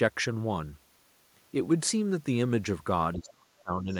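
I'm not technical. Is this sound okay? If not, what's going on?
No. From 3.14 to 3.92 s the talker's speech is pushed down hard, at its deepest nearly to silence. This is likely speech suppressed in double talk: both sides spoke at once, and the echo canceller, unable to tell the talker from the loudspeaker echo, turned everything down.

Right after, from 3.91 to 3.97 s, a brief, very faint scrap of a second voice comes through. That is the other side's voice leaking through, likely loudspeaker sound the echo canceller failed to fully remove from the microphone.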